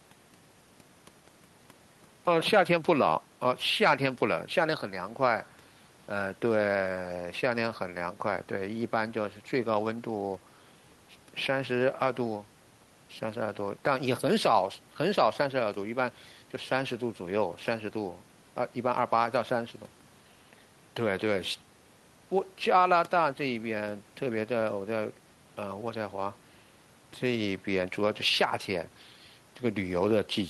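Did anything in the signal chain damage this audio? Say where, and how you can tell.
No, nothing in this speech recording stood out on listening as damage from any stage of the signal chain.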